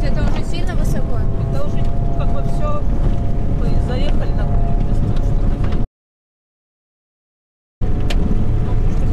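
A short audio recording with one audio dropout to silence from 5.85 to 7.81 s. The sound cuts off abruptly and returns just as suddenly almost two seconds later, with nothing at all in between, not even room tone, so that stretch of material is simply gone. The likely cause is a momentary loss of the input signal while recording continued and wrote silence. On a waveform the gap is a flat line, and on a spectrogram a dark band with hard vertical edges.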